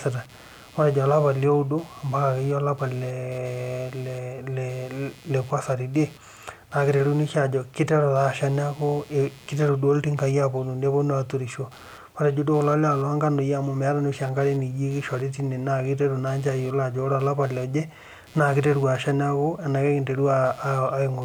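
From start to finish, computer activity noise runs underneath the speech: a thin buzzing chirp pulsing at roughly 150 times a second, sitting about 30 dB below the voice. It comes from load changes in the computer disturbing the ground that the audio circuit shares, so it follows processing activity rather than the speech. On a spectrogram it appears as faint, evenly spaced vertical striations and harmonic lines that persist through pauses. The waveform shows a low ripple where silence should be flat.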